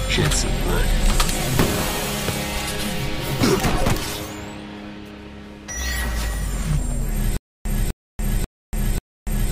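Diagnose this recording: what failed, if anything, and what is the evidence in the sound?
Playback stage: stutter with silent gaps from 7.37 s to the end, a 251 ms burst every 539 ms, likely a stalled stream; the spectrogram shows identical blocks between blank columns.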